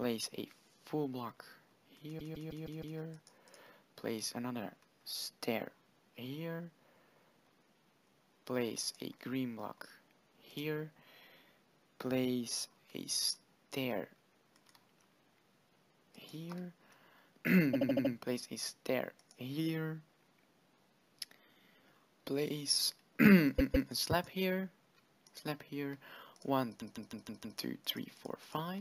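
Repeated frames stutter the sound at 2.18–2.97 s, 17.73–18.12 s, 23.58–23.89 s and 26.79–27.57 s. Blocks of about 157 ms, 78 ms, 157 ms and 157 ms replay five, five, two and five extra times as duplicated compressed frames decode again, lengthening the audio.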